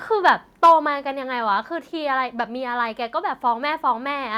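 From 0.25 to 0.3 s, and again from 0.63 to 0.73 s, the loudest syllables turn harsh and crackly, with peaks flattened against a hard ceiling. This is likely microphone overload: input about 2 dB, then about 4 dB, too hot for the converter. Around a tenth of samples are cut in the second burst. Unlike codec distortion, the grit tracks only the peaks.

At 0.66 s, inside that second burst, both speech and background drop by 2 dB in a single step and stay lower. This points to the microphone volume being stepped down, likely by the call software reacting to the clipping. A fade or gate would glide or pump, but this drop is one clean step.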